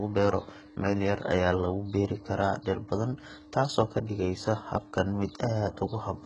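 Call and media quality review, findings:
Speech, entire clip. Treble sounds synthetic: s sounds gritty, lispy, metallic. Nothing above 11.1 kHz. Heavy damage, consistent with a bitrate near 12 kbps. Likely HE-AAC compression. Upper band rebuilt from copied lower bands, so harmonics misalign across the crossover.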